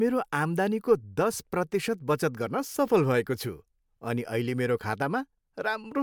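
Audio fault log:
No faults are heard in this speech clip. Nothing in it calls for an entry in the log.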